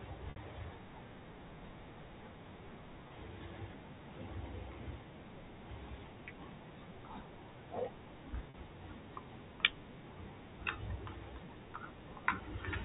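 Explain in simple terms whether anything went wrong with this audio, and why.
Packet loss with pitch repetition at 0.30 s, 3.08 s and 8.50 s: short chunks of the speech, 60, 20 and 40 ms long, never arrived. The receiver filled each gap by repeating the last stretch of voice, fading it out. The shorter gaps sound like a brief, held, buzzy note, while the 60 ms one fades into silence before the speech returns.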